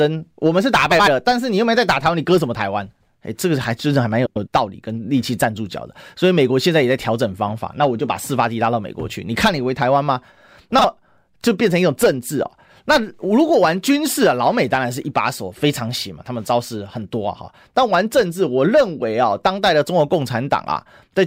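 A garbled flutter breaks into the speech at 0.91 to 1.08 s, 2.92 to 3.09 s, 4.26 to 4.48 s and briefly at 10.78 to 10.85 s. These are frames out of order: two adjacent blocks, each about 78 ms in the first two cases, 105 ms in the third and 26 ms in the last, were decoded in swapped sequence. No time goes missing; each short stretch simply plays with its halves exchanged.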